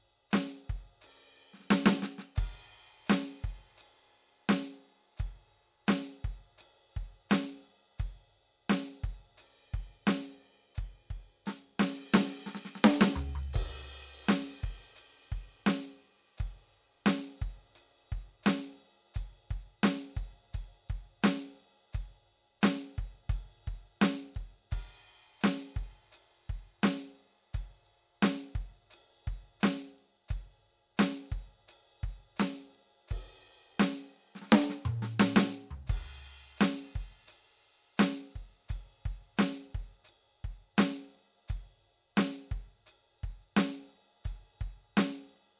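No technical faults are audible.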